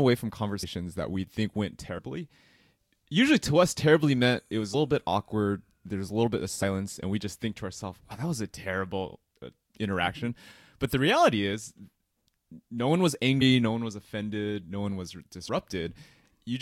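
Compressed frames skipped in this speech clip: the decoder never played several runs of coded frames, so the audio jumps ahead by roughly 70 to 150 ms each time. This happens at 0.62, 1.97 (after "that we think went"), 4.73 (between "terribly meant it was" and "bit awkward"), 6.62, 8.10, 13.40 (between "no one was" and "no one was offended") and 15.47 s.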